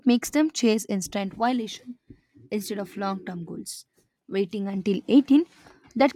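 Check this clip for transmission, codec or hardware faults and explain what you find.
No transmission, codec or hardware faults can be heard in this speech recording. Nothing in the audio calls for further attention.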